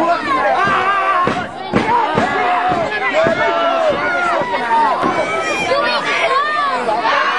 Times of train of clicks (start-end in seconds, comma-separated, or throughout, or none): 3.71-7.33